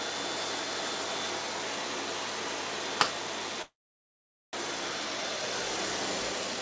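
From 3.62 s to 4.57 s there is a long network dropout, likely caused by packets failing to reach the receiver for close to a second. The receiver filled the gap by extending the last bit of sound into a fading buzz that gives way to silence for most of the stretch, about 0.83 s. When the sound returns, roughly 0.6 s of it is gone, and playback is running a few tenths of a second later than before.

Near the end, from 6.32 s to 6.60 s, a jitter buffer speed-up follows. Having built up more held audio than it wanted, the buffer trimmed tiny pitch-period-sized slices over and over, around 70 ms in total. The sound plays at 125% speed without any change in pitch, so it comes across as briefly rushed and compressed in time. Throughout the clip, the call path leaves nothing above 8 kHz, which fits a wideband call codec such as G.722.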